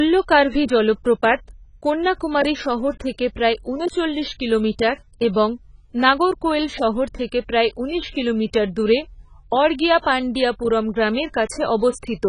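From start to finish the speech has nothing above 10.5 kHz, and what remains sounds dull and smeared, with a watery, warbling fizz on sibilants and held vowels. That points to heavy AAC compression as the likely cause, with damage severe enough to fit a bitrate around 16 kbps. A simple low-pass filter would leave the band below the cut-off clean. Here the content beneath it is also patchy and swirling, as bands are dropped or filled with substitute noise.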